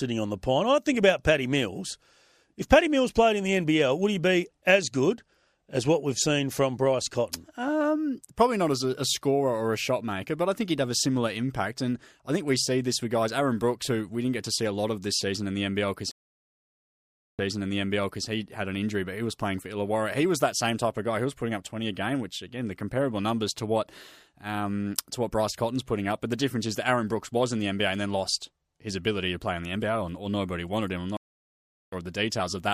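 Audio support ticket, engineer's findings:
Stream reconnect, 16.11–18.27 s: speech drops out for about 1.27 s, then resumes roughly 0.88 s behind where it stopped, so a short stretch repeats. Connection lost; player reconnects, new decoder starts mid-stream, server resends buffered burst.

Stream reconnect, 31.17–31.94 s: about 0.76 s of silence, then speech picks up roughly 0.4 s further on, so content is skipped. Same reconnect and decoder restart, this time joining the live edge.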